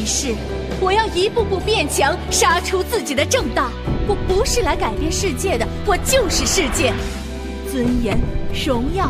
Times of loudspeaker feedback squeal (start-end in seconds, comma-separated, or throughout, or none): none